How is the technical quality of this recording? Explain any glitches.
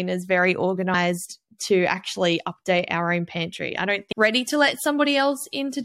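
The recording has two faults late in the clip, a brief decoding glitch followed by an uncorrected treble boost.

At about 4.11 s there is damaged data in a compressed stream. A short run of corrupted bytes stops the decoder from reading its frames, so it loses sync and skips ahead to the next valid header. It is heard as a quick chirp or blip lasting well under 20 ms. On a waveform it appears as a tiny discontinuity. On a spectrogram it shows as a thin vertical smear of broadband energy.

From about 4.33 s to the end, pre-emphasis is left on. The treble was boosted before storage and the matching de-emphasis was never applied. The shape fits the CD 50/15 µs curve, which lifts 10 kHz by about 8 dB relative to 1 kHz. The speech turns thin, bright and hissy on sibilants. A spectrogram shows the upper bands abruptly denser and brighter from that point onward, and the waveform looks spikier with sharper transients.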